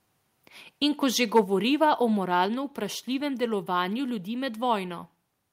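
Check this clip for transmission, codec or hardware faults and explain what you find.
There are two hardware-side faults in this speech: a brief microphone overload and two one-step drops in microphone volume.

At 1.36 to 1.40 s, right after "ko že", there is microphone overload. The peaks overshoot the converter's limit by about 4 dB, which flattens roughly a tenth of the samples. This gives a harsh, crackly edge. The waveform shows squared-off tops, and the spectrogram shows broadband splatter. The likely cause is input volume set too high.

The microphone volume is stepped down at 1.44 s and again at 2.46 s, the second just before "vprašljivem delovanju ljudi". Each time, voice and background fall by about 3 dB at once. The waveform envelope shrinks abruptly, and the spectrogram dims uniformly. This is likely the call software lowering the input gain after the overload.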